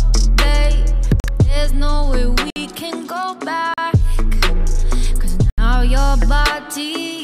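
Blocks of digital silence at 1.2 s, 2.5 s, 3.74 s and 5.5 s, lasting 40 to 80 ms, likely where output buffers went unfilled; the cuts have hard edges, unlike smoothed concealment gaps.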